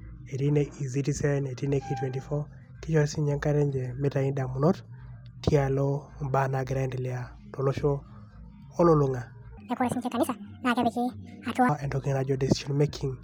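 From 9.57 to 11.69 s, a section at the wrong speed: speech runs 1.71 times fast, about ten semitones higher, likely from a mismatched clock.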